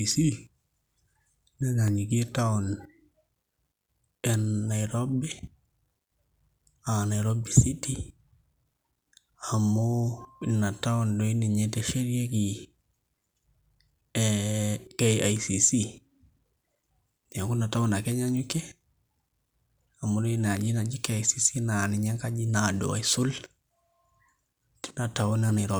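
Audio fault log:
1.88 s, block of digital silence: a single sharp tick in the speech, because the signal drops to zero for about 0.67 ms and returns with no fade. That abrupt step is what makes the tick. The gap's length fits a 32-sample block missed by the output buffer.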